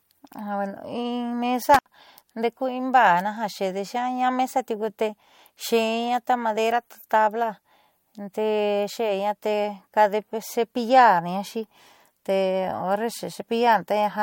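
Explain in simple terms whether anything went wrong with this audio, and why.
Around 1.74 to 1.89 s the speech briefly cuts out with a crackle, a classic intermittent contact: a loose cable or plug opening for about 70 ms.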